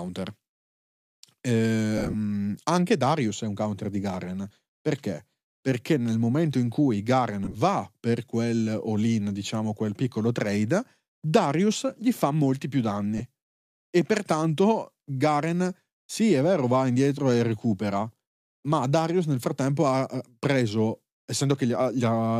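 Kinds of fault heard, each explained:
lost LE Audio frames: The speech breaks into brief grainy, hissy smears at 1.98 to 2.15 s, 7.45 to 7.56 s and 13.18 to 13.21 s. The first is roughest, with gaps spread over about 160 ms and the longest run near 40 ms. The pattern fits dropped 10 ms frames on a likely LC3 Bluetooth link, where the decoder patches each gap by replaying the last spectrum with scrambled signs.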